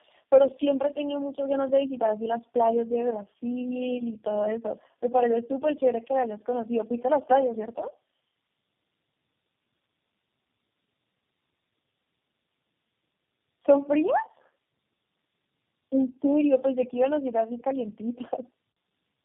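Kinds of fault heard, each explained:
Tandem speech coding: three low-rate speech codecs in a row, each re-coding the last one's degraded output, leave the speech rough, muffled and warbly, with nothing above 3.3 kHz.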